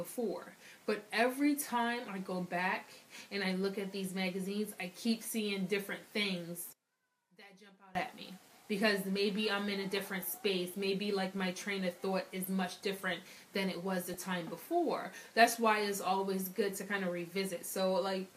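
One channel inverted, from 6.73 to 7.95 s: for just over a second the sound collapses by about 24 dB, with the centred content nearly vanishing and only a faint remainder left. That points to polarity reversal on one stereo channel, likely, so that when the two channels are summed to mono the material common to both cancels and only the small difference between them survives. DAB burbling, from 14.05 to 14.19 s: a brief disturbance lasting about 0.14 s sits over the audio, with short blips of noise in single frequency bands. That fits roughly six corrupted MP2 frames from weak digital radio reception, where a bit error rate of around a tenth of a percent lets errors slip past the error correction and garble sample values and scale factors in single sub-bands.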